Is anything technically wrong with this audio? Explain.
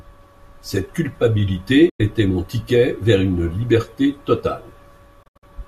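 Yes. Digital broadcast dropouts occur at 1.89 to 2.00 s and 5.23 to 5.48 s. The receiver muted failed frames with a quick fade, leaving full-band blank columns on the spectrogram and flatline gaps in the waveform. The second dropout is broken into several short holes.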